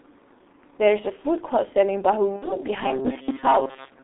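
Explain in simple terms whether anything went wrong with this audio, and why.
G.723.1 codec damage runs through the whole clip. This old internet-phone codec squeezes speech into very little data, keeping only the band from about 250 Hz to 3.7 kHz. Here the damage is heavy: the speech sounds muffled and hoarse, and consonants smear together.

VoIP packet loss concealed by the speech codec occurs from 2.36 to 2.56 s. About 60 ms of audio never arrived, so the decoder guessed by stretching the last sound it had and fading it. That produces a buzzy, fading smear, and the speech stays weak until about 2.56 s.

Robotic sound from repeated short buffers runs from 2.83 s to the end. The speech turns into a stiff, metallic buzz pitched at 134 Hz. The likely cause is audio arriving too slowly, so the software kept replaying a tiny slice about 7.5 ms long, covering most of that stretch.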